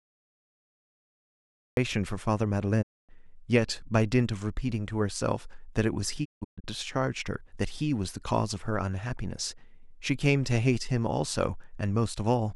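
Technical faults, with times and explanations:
0.00–1.77 s: cut-off start. The file opens on digital silence and the speech enters abruptly at 1.77 s, already mid-sound, with no natural attack or fade-in. Capture began late, so whatever preceded that point was never recorded.
2.81–3.11 s: digital broadcast dropout. The speech fades out over about 20 ms and goes silent for roughly 256 ms, consistent with eight lost frames. The receiver muted on bad or missing data, so that stretch of programme is gone.
6.24–6.66 s: digital broadcast dropout. This one breaks into several short holes spread over about 384 ms, losing about 320 ms in total. The longest gap is 160 ms, and each one has a 20 ms fade, as the receiver muted and recovered repeatedly.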